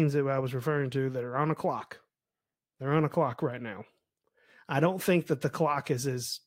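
Nothing technically wrong turns up in this speech clip, so there's no fault to point to, no time to flag and no cause to explain.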